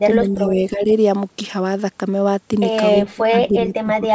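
Speech suppressed in double talk, from 0.07 to 0.89 s and again from 3.12 s to the end. The speech dips by up to about 10 dB, then up to about 20 dB, likely because the echo canceller could not separate the talker from the overlapping far-end echo and turned both down.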